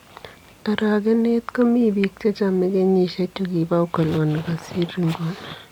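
No technical faults are audible.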